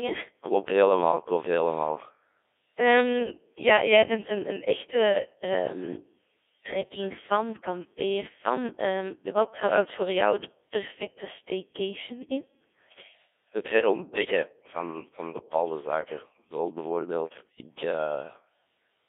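Throughout the whole speech clip, the audio has passed through a Codec 2 vocoder at around 1.6 kbit/s, which fits a digital-radio link. Only pitch, voicing, energy and a rough spectral envelope survive. The decoder rebuilds everything from sine waves within a 300 Hz to 3.5 kHz line band, so the voice comes out heavily robotic and buzzy.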